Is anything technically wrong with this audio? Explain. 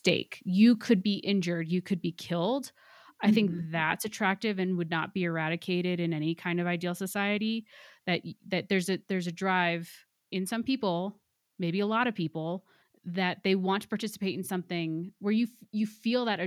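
Yes. At 1.02 s the speech and the background noise both drop abruptly by about 4 dB, and the level stays there. This is a microphone volume stepped down. The likely cause is call software that judged the input too hot and lowered the device's input volume in one step. A noise suppressor or automatic gain control would ride the level gradually or treat the voice differently from the noise. Here everything shifts together in a single instant, with no recovery.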